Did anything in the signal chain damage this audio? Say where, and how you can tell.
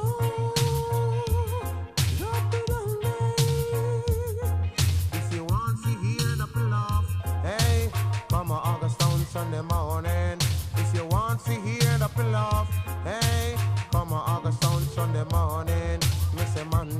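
Yes. From 5.50 to 7.20 s, a channel delay (comb filtering) fault: one channel runs under a millisecond behind the other before the mono sum, pointing to a few-sample misalignment at the converter or buffer. Shared content cancels in evenly spaced notches from around 700 Hz upward, so the sound turns hollow and phasey.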